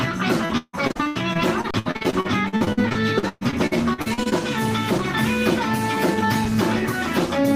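From 0.45 to 4.33 s, repeated packet loss leaves about thirty holes, the longest 158 ms. Each is patched by extending the previous sound, so roughly a third of this stretch sounds choppy and robotic.

At 1.71 to 1.74 s and again at 6.45 s, an underrun with held sample occurs: the output buffer empties for 32 ms, then 2.5 ms. The held level flattens the sound briefly before it resumes where it stopped, without a sharp click.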